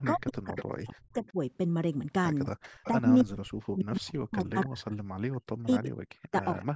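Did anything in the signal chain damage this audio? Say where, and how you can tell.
Yes. Echo leak, in call processing: a faint copy trailing by 279 ms at 0.04–1.31, 2.63–3.23, 4.07–4.65 and 6.43–6.65 s, likely loudspeaker pickup the echo canceller missed.

Speech suppressed in double talk, same stage: the speech drops deeply, roughly 40 dB, over 0.13–1.37 s and from 2.92 s onward, likely the canceller ducking its own talker along with the loudspeaker echo.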